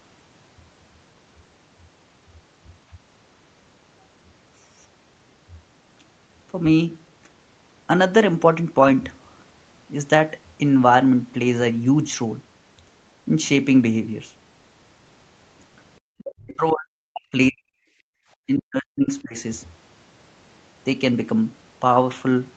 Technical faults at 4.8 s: none

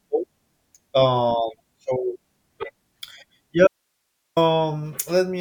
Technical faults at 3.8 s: audio dropout to a faint residue

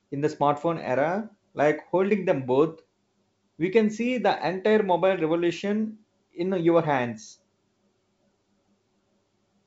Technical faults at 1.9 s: none

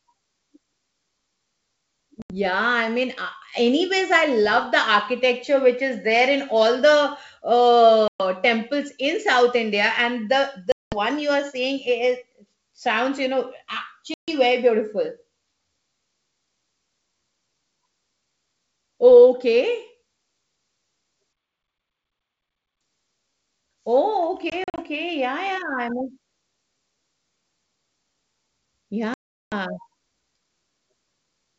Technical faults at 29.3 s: packet loss on an ADPCM call

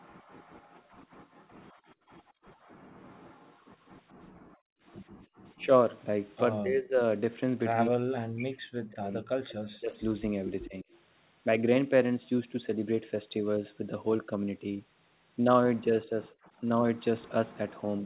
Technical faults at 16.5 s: speech suppressed in double talk

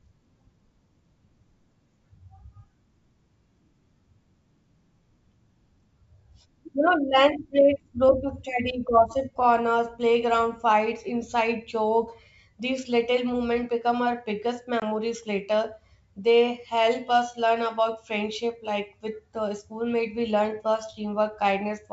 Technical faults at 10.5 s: none

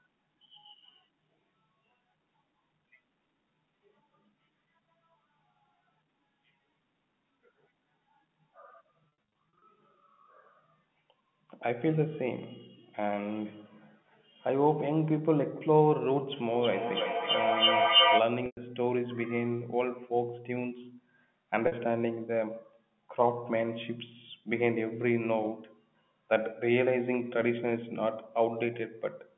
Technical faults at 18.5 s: packet loss with pitch repetition

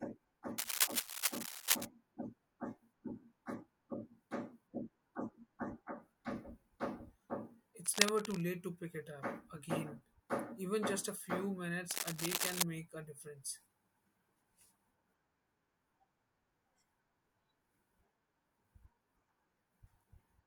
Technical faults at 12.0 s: cable scratch noise

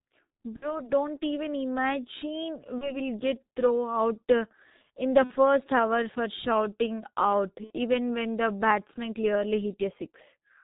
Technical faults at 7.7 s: G.723.1 codec; VoIP packet loss concealed by the speech codec

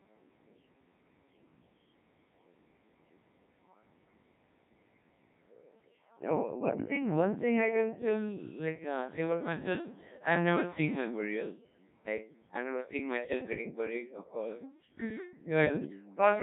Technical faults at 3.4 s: Codec 2 vocoder

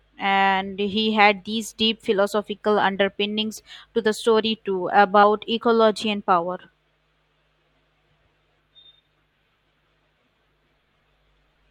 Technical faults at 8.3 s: none

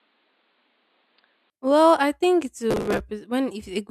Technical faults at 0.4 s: input switched to a poorer device

